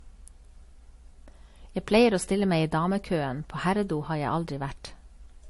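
From start to finish the speech carries the signature of transcoding between lossy codecs: nothing survives above 11.3 kHz, and two distinct kinds of damage sit on top of each other. The artefacts of the MP3 pass are heard together with those AAC adds on top. One codec pass would give a single consistent artefact character. Here the layering points to a likely MP3 encode around 48 kbit/s later re-encoded to AAC-LC near 55 kbit/s.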